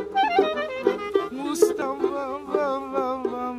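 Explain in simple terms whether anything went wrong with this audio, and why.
Something did go wrong, once, at about 1.82 s. It is a CD skip. The disc player lost its place on the disc, perhaps from a knock or a flaw on the surface. The laser jumped to a different turn of the spiral track. The player went silent for a tiny moment, just a few thousandths of a second. Then the audio carried on from a new spot. That is why you hear a tick and a sudden jump in the sound, forward or back.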